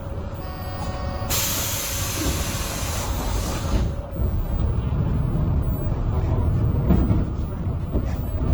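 An everyday sound recording, with a fault that runs through the whole clip. Two kinds of compression artefact are heard together, which points to transcoding between lossy codecs. The likely chain is an MP3 encode at around 96 kbit/s, then an Opus encode at around 32 kbit/s. The second codec wastes bits on the first codec's artefacts and adds its own. Nothing is heard above 20.2 kHz.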